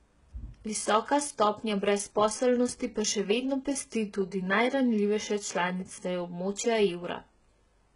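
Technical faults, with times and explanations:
Throughout, HE-AAC compression: heavy damage, nothing above 11 kHz, treble likely rebuilt from copied lower bands at roughly 12 kbps, so sibilants sound gritty and metallic.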